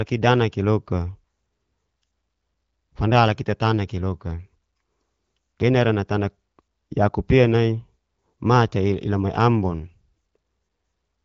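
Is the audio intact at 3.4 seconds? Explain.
Yes, at 3.4 seconds the speech is intact, with no dropout, glitch or other fault at that moment.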